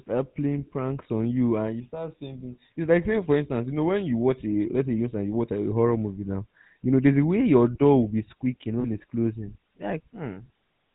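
Throughout, the speech carries the buzzy, gravelly roughness of the GSM full-rate codec, with plainly audible damage that points to the 13 kbps full-rate coder. The codec rebuilds each sound by driving a model of the vocal tract with evenly spaced pulses, keeping only a third of the excitation samples and nothing above 4 kHz. That produces a constant coarse texture, unlike the smeared, watery swirl of low-bitrate transform codecs.

From 8.8 to 8.86 s, between "will be squeaking" and "it's closing", lost GSM frames briefly freeze the sound. The decoder repeats the last good frame's settings to fill a gap that fits about two 20 ms frames. The result is a short, rough metallic ring rather than a hard cut to silence or a click. Unlike a dropout, the audio is held and buzzes instead of vanishing.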